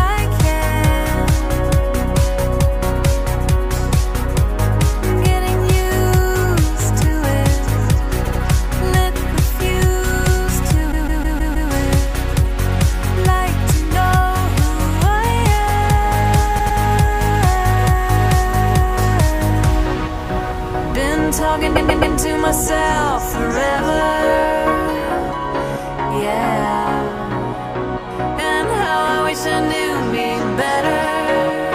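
Repeated frames show up four times. A short chunk of compressed audio gets played again back to back, so you hear a stutter. At 8.24 s a 78 ms block plays three times. At 10.91 s a 157 ms block loops six times, the nastiest one. At 16.58 s a 105 ms block plays three times. At 21.75 s a 131 ms block plays four times. Each one stretches the audio by the replayed time.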